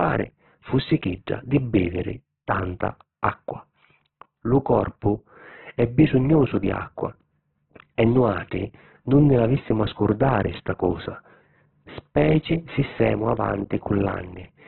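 From start to finish the speech is cut off above about 4.1 kHz and sounds rough and grainy, with a noisy fizz on the tones. That's likely heavy Opus compression in its music mode, pointing to a very low bitrate near 8 kbps.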